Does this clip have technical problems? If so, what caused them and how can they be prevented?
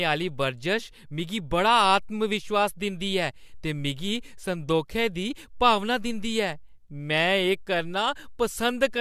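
No, nothing in this speech recording stood out as a technical problem on listening, so there is nothing to trace back or prevent.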